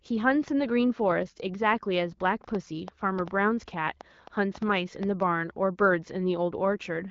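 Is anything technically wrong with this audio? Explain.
Yes, there's a train of clicks from 2.44 to 5.23 s: about ten uneven pops, roughly four a second, poking about 5 dB above the speech, likely interference or a faulty connection. The speech has the light coloring of AMR wideband (HD Voice) at what sounds like 12.65 kbit/s.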